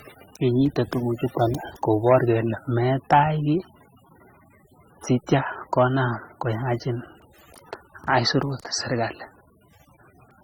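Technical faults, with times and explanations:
Throughout: transcoding between lossy codecs. The speech carries two layers of coding damage heard together, likely from a low-rate AAC-LC pass re-encoded to Opus. On a spectrogram, blocky, patchy high bands sit below a cut-off near 20 kHz.
2.07 to 2.17 s, 3.13 to 3.19 s, 5.78 to 5.82 s: hard clipping. Peaks overdriven by about 4, 5 and 2 dB are sliced flat, giving brief crackly fuzz. The waveform shows squared-off tops; the spectrogram shows vertical streaks of harmonics reaching high frequencies.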